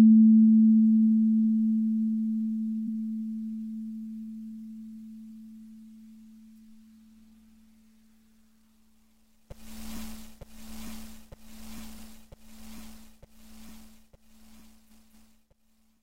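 A recording of everyday sound with repeated frames: short blocks replay at 2.84 s and 11.94 s (about 93 ms each, once), and a 232 ms block plays twice more from 14.86 s to 15.33 s, a stutter consistent with compressed frames written more than once, lengthening the audio.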